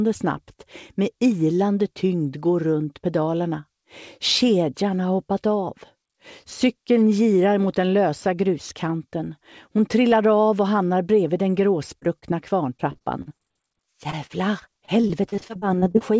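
At 12.00 to 12.03 s and again at 12.19 to 12.33 s there is short concealed packet loss. About 20 ms of audio failed to arrive each time, and the receiver bridged the hole by extending the preceding sound before fading back into the real signal. Each is heard as a single brief smear or wobble, and in the second a little of the sound, about 11 ms, drops out. These are isolated events, not a sustained run.

From 12.77 to 13.53 s, and then from 14.11 to 16.02 s, comes repeated packet loss, which gives a robotic sound. The first stretch has seven gaps and the second fourteen, each no longer than 28 ms, with roughly a sixth of each stretch patched. Because the patches come one after another, the sound turns choppy, with pieces missing. That steady chain is what sets it apart from the one-off smears before it. Throughout, nothing reaches above 8 kHz, which fits a wideband call codec.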